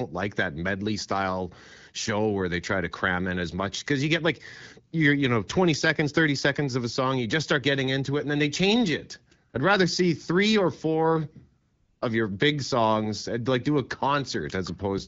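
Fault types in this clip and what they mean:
AMR comfort noise: The sending phone's voice activity detection judged the talker silent and stopped transmitting speech frames, so the receiving end filled each gap with synthetic noise built from a rough estimate of background level and spectrum. Here the real background gives way to a smooth, steady hiss twice: briefly, for about 40 ms at 9.49 s after "then they change it", and for 400 ms from 11.61 to 12.01 s after "see three or four".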